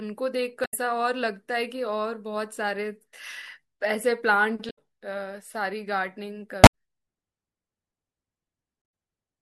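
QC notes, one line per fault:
0.62–0.73 s, 4.66–4.78 s, 6.62–6.69 s and 8.82–8.84 s: damaged data in a compressed stream. Corrupted bytes in the encoded speech cause the decoder to misread frames, lose sync and hunt for the next frame header. Each spot sounds like a short chirp, squawk, click or brief hole in the speech.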